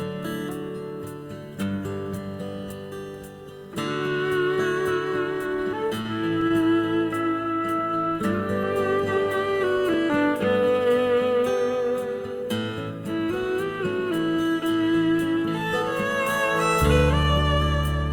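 From 6.01 to 6.75 s come repeated stalls (stutter): the jitter buffer ran dry four times, and the last sound was held over 78 ms in all, the longest gap 36 ms. Nothing is lost. Unlike dropouts, the gaps are filled rather than silent, so the sound drags and catches instead of cutting out.

From 17.23 to 17.64 s a jitter buffer speed-up trims excess buffered audio. Short pitch-period pieces, around 70 ms in total, are removed, so the sound runs at about 114% speed. Unlike a resampling error, the pitch stays unchanged. Only the pace hurries.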